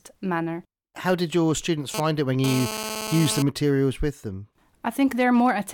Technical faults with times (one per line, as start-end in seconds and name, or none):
1.94-3.42 GSM phone buzz